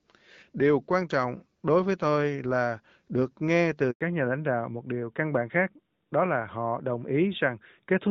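At 3.91 s there's a handover gap: the call jumps networks, nothing arrives for 100 ms, and the sound just drops out before picking back up. From 4.01 s on, it's a fallback to narrowband. The link slips off the HD Voice codec, and everything above 4 kHz is gone, so the speech sounds duller and rougher to the end.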